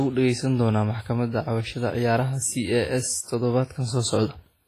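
Throughout the speech, the sound rings and smears, with a washy hiss that swells and fades with the signal and nothing above 15.3 kHz. The damage is heavy, likely from WMA compression, which fits a low bitrate near 24 kbps: long transform blocks spread quantisation noise in time and zero out weak components.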